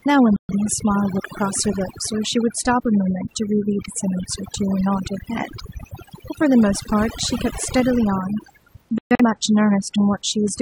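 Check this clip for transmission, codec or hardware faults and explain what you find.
Two faults are present: heavy-handed noise reduction across the whole recording, and two short dropouts from rejected codec frames.

Overdone noise removal runs throughout. The noise reducer was set too strong. It pulled individual frequency bands down whenever they sat near its noise estimate. Quiet speech detail went with them. The background drops and breaks up into twinkling specks.

Corrupt frame muted occurs twice, at 0.36 to 0.54 s and 8.98 to 9.22 s. Damaged compressed frames were refused by the decoder, and silence replaced them. The gaps start abruptly and last 0.18 s and 0.24 s, which fits three and five frames. Timing stays intact.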